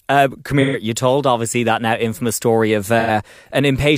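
At 0.61 to 0.77 s, and again at 2.99 to 3.10 s just after "now infamous story of", AAC frame loss with concealment leaves smeared, noisy patches where the decoder rebuilt missing frames from the last good spectrum. This is not a clean dropout, since nothing falls to silence. Gaps of about 128 and 85 ms suggest three and two lost frames.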